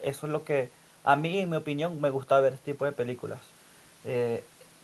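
Nothing stood out as a technical problem on listening to this speech recording.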